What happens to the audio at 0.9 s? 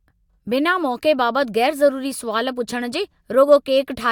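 Nothing goes wrong at 0.9 s; the speech carries straight through that moment with no dropout, click, distortion or other fault.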